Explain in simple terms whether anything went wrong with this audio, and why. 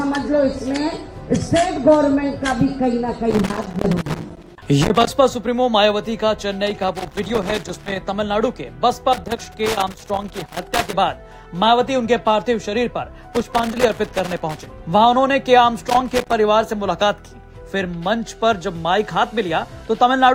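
A plug or contact in the signal chain was loose, a fault called loose connector crackle. Whenever it shifted, the worn contact kept connecting and disconnecting, chopping the sound into bits. You hear this as rough, uneven bursts of scratching and crackle at 3.3 to 5.1 seconds, 6.7 to 8.0, 9.1 to 10.9, 13.3 to 14.7, and a shorter one at 15.9 to 16.3 seconds.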